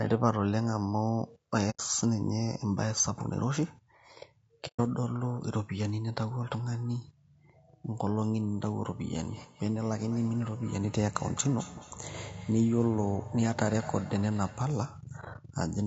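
Throughout the clip the speech has a rough, grainy texture, with noise filling the gaps between harmonics and a thin, synthetic-sounding top band. This is likely low-delay AAC compression (AAC-ELD) at a low rate, consistent with about 32 kbps. On a spectrogram the harmonic lines look smeared and the upper band looks patchy.

At 1.70 to 1.80 s and again at 4.67 to 4.80 s the sound fades out and back in, leaving soft-edged holes of about 90 and 120 ms. This is AAC frame loss with muting: the decoder zeroed the missing audio, and the overlapping windows taper each edge. The waveform shows a smooth dip to silence.

From 9.28 to 14.79 s each utterance returns as a fainter, thinner, ringing copy roughly a fifth of a second later, peaking at about 19 dB below the speech. This is feedback echo between two devices: one device replays what the other's microphone sent, and that microphone picks it up again. 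A spectrogram shows faint repeated ghost copies of each syllable.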